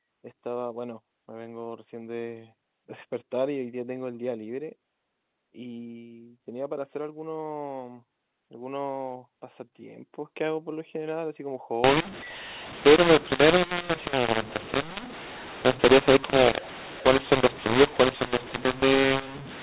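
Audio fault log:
11.84–19.62 s, mu-law and A-law mixed up: the telephone-band audio, clean up to here, turns harsh and grainy because A-law bytes are being decoded as mu-law. The mismatched curves scramble levels and lift near-silent samples, so pauses fill with hiss to the end.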